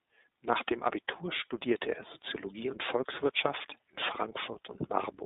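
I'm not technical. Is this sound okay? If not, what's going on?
No. From start to finish the speech has been squeezed through the iLBC codec, a compression scheme built for internet phone calls. It keeps only a narrow slice of sound, roughly 200 Hz to 3.7 kHz, so the voice sounds thin and phone-like. It also rebuilds the speech in short 20 ms chunks, each handled on its own, which leaves the voice plainly rough and slightly artificial, like a cheap call line.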